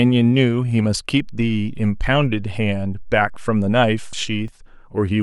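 A DC step occurs at 1.20 s, where the zero line of the speech waveform suddenly shifts by about -29 dBFS, as happens when a converter recalibrates or an input carrying an offset is switched into the path. The offset lasts until 4.48 s. The jump is heard as a brief low thump or click at 1.20 s, while the speech carries on unchanged over the displaced baseline.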